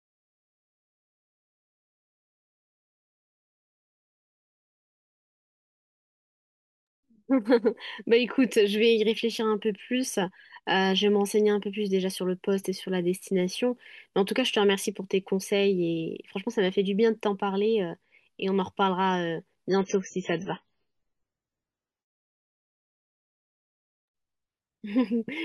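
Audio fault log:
19.70 to 23.70 s, adaptive stream at a lower bitrate: the speech suddenly turns dull and swirly, with nothing above 7.3 kHz and watery codec artefacts, then snaps back with no gap. The player switched to a much lower-bitrate version, which fits a drop from around 128 to about 16 kbit/s MP3.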